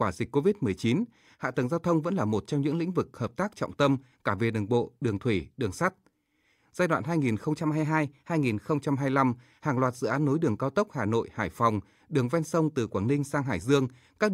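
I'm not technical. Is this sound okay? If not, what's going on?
No. From 7.59 to 8.78 s the speech suddenly runs about 5% fast and sits nearly a semitone higher, then snaps back to normal. That's a drift correction step: software keeping two clocks in sync likely nudged the playback rate to even out its buffer.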